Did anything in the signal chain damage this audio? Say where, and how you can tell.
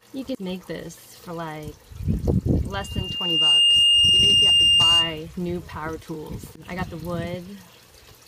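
Yes: loudspeaker feedback squeal in the acoustic playback loop. A 2.8 kHz tone swells within about a second at 2.72 s, sits roughly 10 dB above the sound, and stops at 5.24 s.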